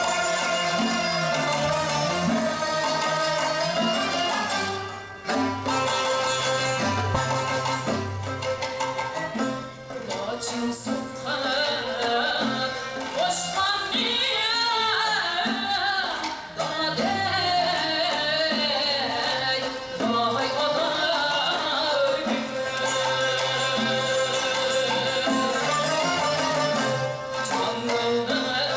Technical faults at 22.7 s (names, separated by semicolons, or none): none